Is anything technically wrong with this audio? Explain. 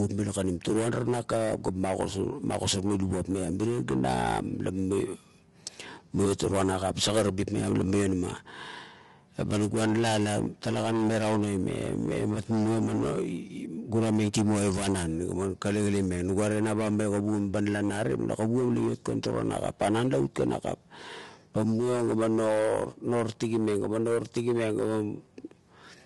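Yes. Throughout the speech the voice sounds rough and grainy, with a noisy fill between the harmonics and nothing above about 11.6 kHz. This is likely low-delay AAC compression of the AAC-ELD kind. Its short frames resolve pitch harmonics poorly and spend bits quickly. At the low rate this damage suggests, roughly 32 kbps, the coder cannot keep the harmonic structure clean, so noise leaks into the gaps and the top band is cut away.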